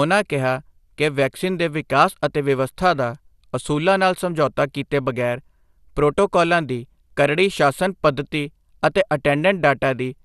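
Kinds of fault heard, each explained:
MP2 compression: throughout the speech, the sound is dull, with nothing above 12.2 kHz, and carries a plainly audible gurgling, granular roughness. This is likely MPEG Layer II coding short of bits, which fits about 80 kbps, switching off upper sub-bands and coarsely quantising those left.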